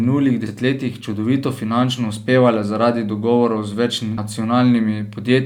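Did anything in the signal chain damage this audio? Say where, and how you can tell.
Yes: compressed frames skipped, at 0.46 s just before "čudovito finančno uspevale zaradi" and at 4.18 s just after "uspevale zaradi dogovorov z". The damage is at the codec stage. Whole frames were either missing from the file or rejected by the decoder as corrupt, so the speech jumps ahead by around 100 ms and then around 150 ms. That fits losing about three and then four frames of 32 ms each.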